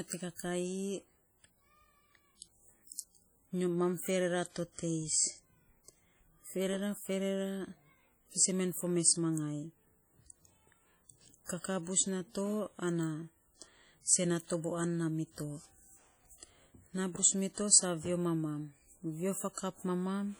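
Heavy WMA compression runs throughout the speech. Its ringing, washy character and hiss that breathes with the signal set it apart from steady background noise; the damage likely fits a 32 kbps encode.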